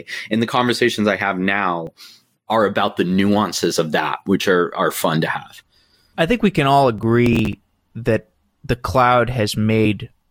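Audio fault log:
1.87–2.03 s and 6.98–7.59 s, processor overload crackle: the processor is falling behind its audio deadlines in runs. Each late buffer, around 5 ms long, is simply dropped, leaving a short hole with abrupt edges. The first burst has a handful of these gaps and the second, longer one about fifteen. Strung together, those hard-edged dropouts make a gritty crackle over the speech that stops once the load eases.
9.85 s, compressed frames skipped: the playback jumps forward by about a tenth of a second of speech. Several whole compressed frames were never decoded, most likely because they were missing or rejected as damaged, and the size of the jump fits a few frames of roughly 20 ms each.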